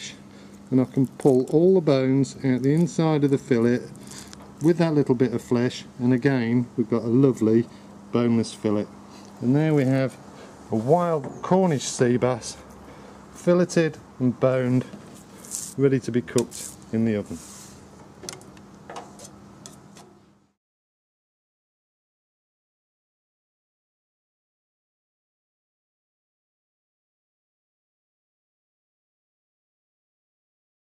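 At 14.83 s there is a short blip where a corrupt frame was decoded: bits flipped inside a single compressed frame, and the decoder played it regardless. Misread gains or codes push energy to wrong frequencies for that frame, peaking around -35 dBFS.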